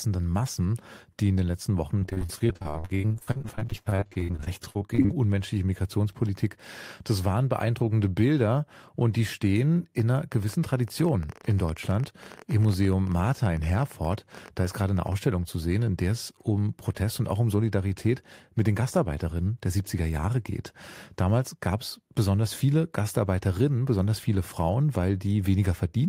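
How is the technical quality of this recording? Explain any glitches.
The recording is marred by one clear glitch, a train of clicks running from 10.00 s to 15.13 s, starting just after "und die stehen" and ending before "zu sehen in der". Around seventy near-identical pulses arrive at roughly 13.9 per second, spaced unevenly, and peak at about the level of the speech itself. The likely cause is electrical interference or a faulty connection or power supply, injecting repeated transients. It sounds like irregular ticking laid over the speech and audible through its pauses.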